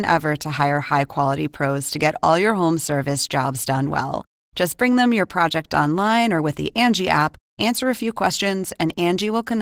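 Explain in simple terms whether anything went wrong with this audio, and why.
Yes, the speech went through Opus voice compression, and the damage is plainly audible from start to finish. The codec squeezes the voice into a small amount of data by modelling the lower part with a speech predictor and adding a rougher layer for the highs, then coding the buzz underneath coarsely. That leaves the voice hoarse and slightly robotic. Unlike a simple treble cut, the top end is still present, just rough.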